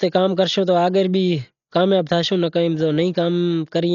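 A speech clip with damage throughout. Nothing is heard above 7 kHz, so it sounds dull. Rough, fluttering noise surrounds the tones. This heavy codec damage is likely Dolby Digital compression at a very low bitrate, around 40 kbps, where unfunded frequency lines get filled with dither noise.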